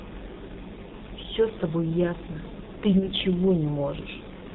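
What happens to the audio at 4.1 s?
At 4.1 s the speech sounds muffled and hoarse, with smeared consonants and nothing above 4 kHz. This is heavy G.723.1 codec damage, present throughout the clip: the codec rebuilds the voice from a coarse model refreshed only every 30 ms frame, which fits a rate of about 6.3 kbit/s.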